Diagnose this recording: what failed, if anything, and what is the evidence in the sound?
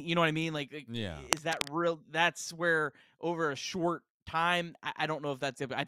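The fault sits in the analogue wiring. From 1.3 to 1.69 s, dense, uneven scratching rides over the speech, about as loud as the speech itself. This is cable scratch noise. Its likely cause is a worn cable or connector being moved, rapidly varying the contact resistance.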